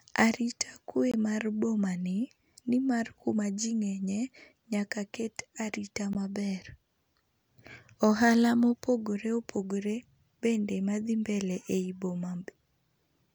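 Twice, the output appears to have gone unfilled for a moment, leaving a block of digital silence. The first runs from 1.12 to 1.14 s, about 21 ms, which fits a 1024-sample buffer, just before "mar boma ni nimar". The second is a 16 ms block at 6.13 s, right after "ng'enye nyaka ket arita". Each drop to zero and back is abrupt, with no fade, and is heard as a brief hole.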